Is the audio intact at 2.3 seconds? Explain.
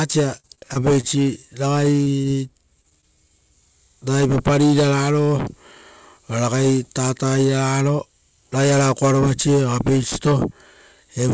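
No. At 2.3 s the sound falls inside a stretch of repeated packet loss (robotic sound) running from about 2.04 to 3.04 s. Five short holes, none longer than about 20 ms, were patched by extending the preceding sound, roughly a tenth of the span in all, giving a choppy texture. On a waveform the patches show as copied cycles with abrupt joins. On a spectrogram, below the call path's 8 kHz ceiling, they appear as brief smeared, repeated slices.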